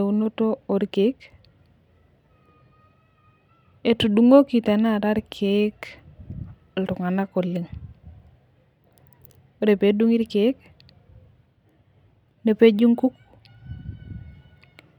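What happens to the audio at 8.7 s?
At 8.7 s the speech runs on intact, with no technical fault at that moment.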